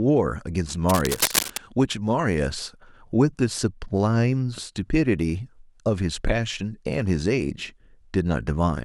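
Cable scratch noise runs from 0.89 to 1.59 s in this speech clip: a dense, uneven scratching and rustling sits only slightly below the speech. It likely comes from a worn cable or connector being moved, its contact resistance fluctuating rapidly.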